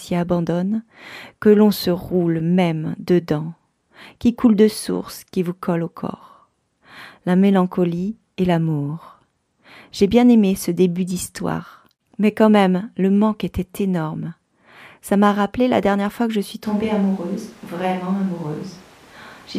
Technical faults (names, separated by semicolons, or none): switch to a distant microphone